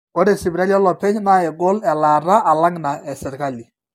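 From start to finish the speech sounds swirly, hollow and smeared, with blurred consonant onsets and nothing above 17 kHz. This is likely generation loss: audio passed through a lossy codec around seven times, consistent with repeated AAC-LC encoding near 96 kbit/s.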